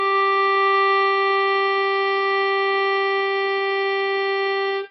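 From the start to the end of the music, the two channels are offset by only a few samples, well under a millisecond, and summed to mono. That is channel delay, producing comb filtering. At so short an offset the first cancellation falls around 7 kHz, so the shared content rolls off gradually toward that notch, giving a hollow, phasey top with a fixed notch.

Also running through the whole clip is heavy codec damage, likely from MP3 compression at a very low rate, around 24 kbps. Nothing survives above 5.8 kHz. That hard, fixed ceiling distinguishes it from the gentle comb slope. Within the remaining band, weak components flicker in and out from frame to frame, giving a watery, swirling texture, and transients smear instead of landing cleanly.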